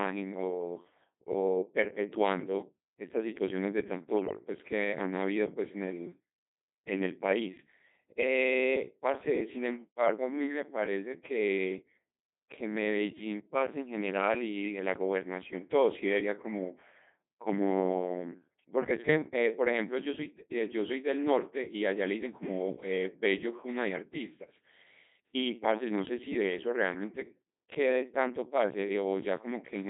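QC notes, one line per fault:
Throughout: Codec 2 vocoder. The speech is rebuilt from sine waves using only pitch, voicing, energy and envelope, so it sounds robotic and buzzy, which fits a 2.4 kbit/s mode. The spectrogram shows neat synthetic harmonic stacks confined to 200 Hz to 3.7 kHz, and the waveform bears little resemblance to natural speech.
4.15–4.40 s: bit errors on digital voice radio. For about a quarter-second, corrupted frames at an error rate of a few percent make the vocoder set wrong pitch, level and voicing. The result is warbles and bleeps. On the spectrogram the harmonics jump erratically, and the waveform shows abrupt level steps.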